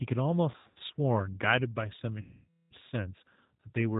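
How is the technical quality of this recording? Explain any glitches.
The technical quality is poor. Low-rate speech coding runs through the whole recording, and two stretches of lost audio were filled in by the decoder.

Throughout, the G.729 codec shapes the sound. It rebuilds speech from a vocal tract filter, a pitch predictor and a few pulses per frame. Nothing above 4 kHz survives, so the speech sounds dull and boxy. The damage is plainly audible. Speech stays intelligible but rough and slightly synthetic, which fits an 8 kbit/s codec.

From 0.52 to 0.82 s, and again from 2.21 to 2.74 s, there is VoIP packet loss concealed by the speech codec. The first gap loses 220 ms in patches over 280 ms, with the longest run at 100 ms. That fits about 11 packets. The second loses 500 ms, which fits about 25 packets. Each time, the decoder repeats its last pitch and filter while the gain falls. 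Speech smears into a fading buzzy tone or coloured noise and stays weak briefly after recovery.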